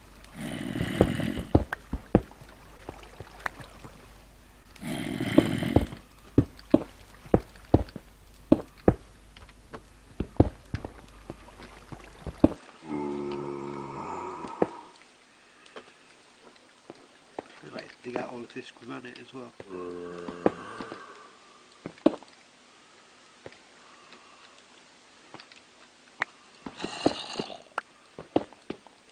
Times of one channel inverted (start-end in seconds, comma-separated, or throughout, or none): none